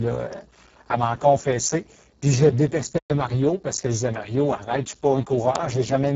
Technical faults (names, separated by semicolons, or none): Speex codec; bit error spike; playback stall